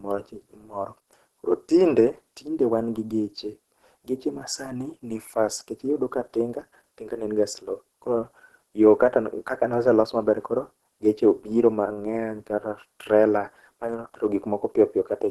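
Throughout the speech, likely Opus compression at a low bitrate in hybrid mode leaves it muffled and hoarse; a spectrogram shows nothing above 12 kHz.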